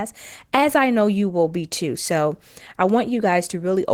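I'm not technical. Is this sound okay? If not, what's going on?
No, not quite. The whole clip carries Opus voice compression damage, and it's plainly audible. The codec squeezed the speech hard: a speech-modelling coder handles the lower range, with a thinner layer added for the highest sounds, so detail gets rebuilt roughly rather than kept.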